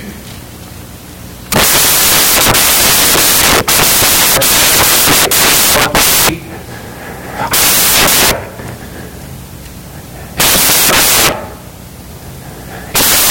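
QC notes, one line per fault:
Throughout: samples built from the wrong bytes. The speech carries loud, broadband hiss for the full clip, because each sample's bytes are being assembled in the wrong order or from a misaligned position. The rapidly changing low-order bits end up as the most significant part of every value, so the waveform becomes essentially random at high level.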